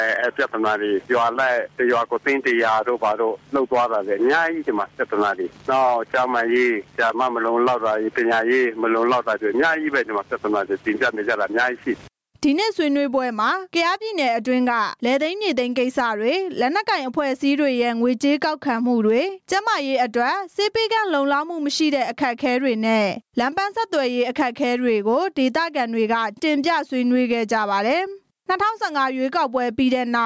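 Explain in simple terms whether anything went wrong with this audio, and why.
Gain pumping runs through the whole recording: loud and soft parts end up closer in level, and the sound is squashed. Unlike a noise gate, which cuts the pauses to silence, the quiet parts stay. The likely cause is the microphone level set far too high, with a fast limiter constantly pulling it down.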